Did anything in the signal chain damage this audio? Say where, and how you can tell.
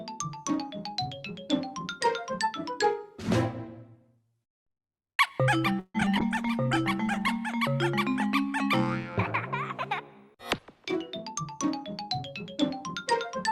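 Yes, and it all happens at the network and call-handling end rather than in the recording itself.

First, repeated packet loss (robotic sound) between 5.79 and 6.17 s. You hear four gaps close together, and the receiver papers over each one by stretching the last bit of sound. That's why it turns choppy and a bit robotic. Nearly half that stretch is concealment. The longest hole runs about 150 ms, and roughly 60 ms just drops out with nothing filled in.

Right after that, from 6.21 to 7.44 s, there's a call bitrate drop. The sound goes coarse and rough for a little over a second, the way Opus sounds when the bandwidth estimate collapses and the encoder gets starved of bits. The degree of roughness fits a fall from around 48 kbps to 18 kbps, and it holds at the bottom for about 1.1 s before things recover.

Then from 11.28 to 13.37 s there's a jitter buffer speed-up. The audio plays about 7% fast with the pitch unchanged, so it feels hurried. 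That's the receiver cutting out short pitch-period slices one after another to shrink a backlog, probably after delayed packets arrived in a bunch. Altogether about 150 ms gets trimmed out.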